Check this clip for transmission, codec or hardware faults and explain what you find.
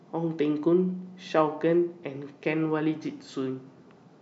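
Nothing in this speech recording points to any transmission, codec or hardware trouble, so there's nothing to flag here.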